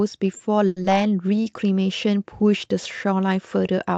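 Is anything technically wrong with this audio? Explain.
Yes, this speech clip has three brief playback faults, all from the call path's timing handling. The audio passes through an Opus-style call codec with a top limit near 8 kHz, at a bitrate around 64 kbps.

From 0.67 to 0.78 s there is a short stall from a late packet. The jitter buffer ran dry while waiting for a packet, so the receiver held the last sound for about 90 ms and then resumed exactly where it stopped. You hear one sound stretched, with a slight buzz or dip, but nothing is skipped. Unlike concealed loss, the content is intact and only the timing is late.

From 0.82 to 0.86 s there is short concealed packet loss. About 60 ms of audio never arrived. The receiver patched roughly 20 ms by extending the previous sound and blending it back into real audio, and the rest was simply skipped, which pulls the playback delay back by a few hundredths of a second. 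It sounds like a quick smear with a piece genuinely gone. That missing material is what separates it from the stall just before.

From 1.29 to 1.52 s there is a jitter buffer slow-down. To rebuild its reserve, the receiver repeated individual pitch periods and bits of pause, adding about 47 ms. That stretch plays at roughly 83% speed while the pitch stays the same, so sounds come out drawn out. It is a gradual, spread-out stretch rather than a single held sound like the stall.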